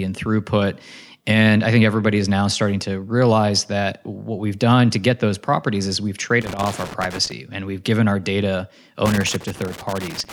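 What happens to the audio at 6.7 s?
At 6.7 s the speech is caught in a burst of loose connector crackle running from 6.41 to 7.32 s, between "those properties is we've" and "and we've given our". A worn contact keeps making and breaking, chopping the signal into irregular scratchy pops. The waveform shows jagged dropouts and spikes, and the spectrogram shows scattered broadband vertical streaks.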